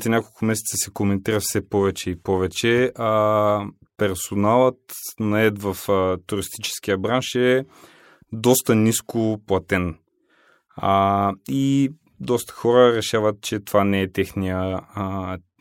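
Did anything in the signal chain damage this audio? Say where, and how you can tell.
No, nothing in the signal chain has audibly damaged this speech recording; it comes through intact at every stage.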